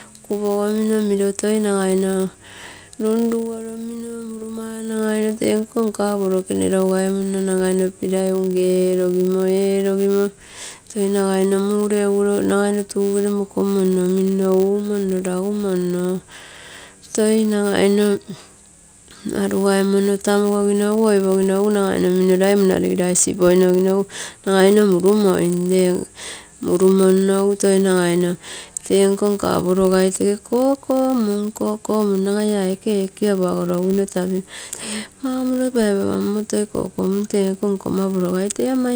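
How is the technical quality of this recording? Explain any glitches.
A steady, fine-grained buzz at about 100 Hz runs under the speech for the whole recording, rising and falling with the level of the speech. This is a filter restarted on every block: the processing filter loses its memory at each block boundary and starts again from silence, so every block opens with a tiny transient. Those clicks arrive 100 times per second, which fits blocks of 10 ms, and they merge into a buzz.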